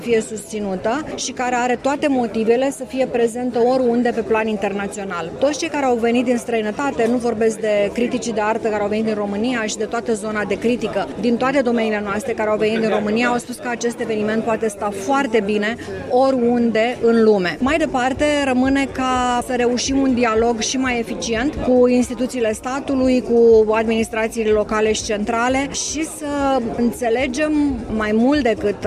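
From 3.31 to 6.35 s, sample clock jitter adds roughness about 50 dB down that grows with loud, bright sound and vanishes in silence, unlike steady hiss.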